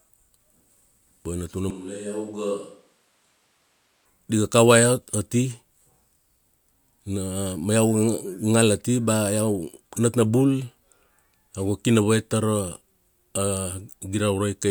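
From 1.70 to 4.05 s, before "di ga", speech turns abruptly hollow, about 10 dB quieter and noisier, likely a switch to a distant microphone rather than added reverb.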